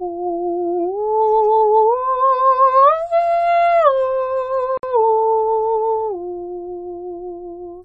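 This music clip has a gap at a join of encoded pieces from 4.78 to 4.83 s: about 57 ms of silence where separately encoded sections were joined with their encoder delay and end padding left in. On a waveform it shows as a flat gap with smeared edges; on a spectrogram, a vertical blank band with blurred edges before the music resumes where it stopped.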